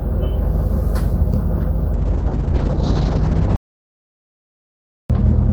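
At 1.95 s there's a call bitrate drop that lasts to the end of the clip. The top end disappears, with the bandwidth collapsing from 20 kHz down to 6 kHz, and the sound turns rough and a bit watery as the encoder codes everything far more coarsely. That's consistent with the rate falling from around 64 kbps to roughly 6 kbps after the bandwidth estimate dropped. It stays at its worst for about 2.1 s and never recovers.

Then at 3.56 s there's an audio dropout to silence lasting about 1.54 s, until 5.10 s. It's dead silence with no room tone at all, and whatever was playing in that stretch is simply gone. It most likely comes from the input being lost, maybe a device disconnecting or a link failing, while silence kept getting written. The sound comes back at 5.10 s still in its degraded, low-bitrate state.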